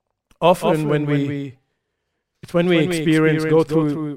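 Throughout, the speech carries a doubled audio track: a second full-band copy trails about 200 ms behind, roughly 5 dB quieter, dry and flat, likely from an out-of-step duplicate capture.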